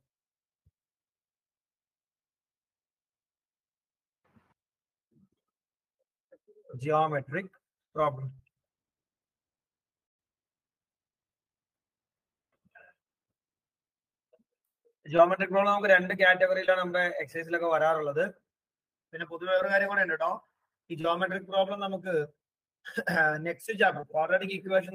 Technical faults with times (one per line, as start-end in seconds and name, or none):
8.34-8.39 short concealed packet loss
15.17-15.19 short concealed packet loss
16.66-16.69 short concealed packet loss
19.57 short concealed packet loss
21.01-21.05 short concealed packet loss
24.01-24.03 short concealed packet loss